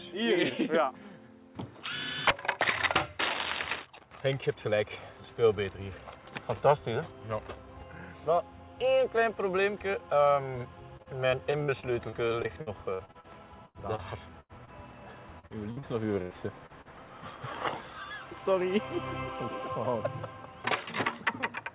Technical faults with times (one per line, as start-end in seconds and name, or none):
10.97-14.70 repeated packet loss (robotic sound)
15.39-16.88 repeated packet loss (robotic sound)